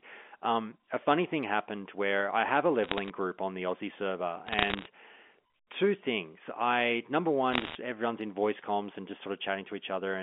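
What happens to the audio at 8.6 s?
Nothing goes wrong at 8.6 s: the speech continues intact through that moment, still carrying the narrow telephone-band character of its G.711 coding.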